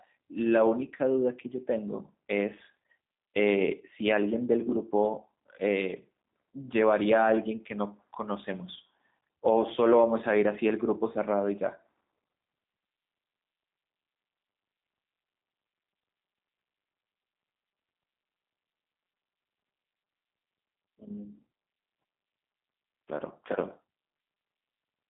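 It's a speech recording that's been through G.729 coding the whole way through, and the damage is plainly audible. Everything sits in a narrow phone band of roughly 200 Hz to 3.7 kHz, with nothing above 3.8 kHz. The voice comes across rough and slightly synthetic because it's being rebuilt from a vocal tract model, a pitch predictor and a few pulses per frame. That's consistent with an 8 kbit/s G.729A stream.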